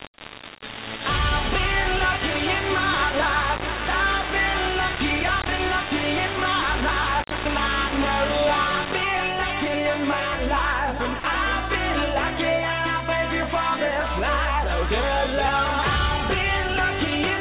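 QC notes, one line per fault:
0.00–9.03 s, low bit depth without dither: grainy, sound-following distortion almost as loud as the sound itself, likely from rounding to about 3 bits. Unlike steady hiss or codec noise, the grit rises and falls with the signal, and quiet passages drop out or sputter between steps.
11.20–11.24 s, sound dropped by the voice detector: a 40 ms gap where the sound gives way to steady, featureless comfort noise before returning, likely because a detector judged that moment to be background. Unlike a lost packet, nothing is repeated or smeared over the gap.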